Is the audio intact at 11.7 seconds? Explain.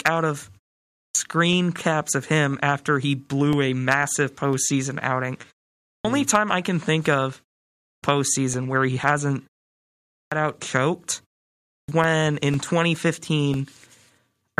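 No. At 11.7 seconds the sound falls inside a clipped start after a pause, running from 11.65 to 11.88 s. After a 0.47 s silence the output device was still waking, so 234 ms of onset is swallowed and the sound begins abruptly, missing its opening.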